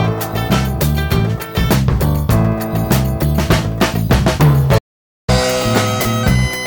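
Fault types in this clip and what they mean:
Playback stall: The audio drops out abruptly at 4.78 s and stays silent until 5.30 s, a gap of about half a second, likely because the player ran short of data or its thread was blocked. The waveform shows a flat line, and the spectrogram shows a blank vertical band.
Catch-up at higher speed: From 5.30 s to the end, the player works through its backlog at 1.15 times normal speed, which raises the pitch by roughly two semitones. On the spectrogram, harmonics sit higher and events are packed closer together. The waveform looks compressed in time.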